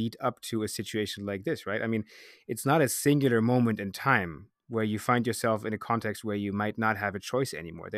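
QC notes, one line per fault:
No faults logged on this speech pass; nothing to flag.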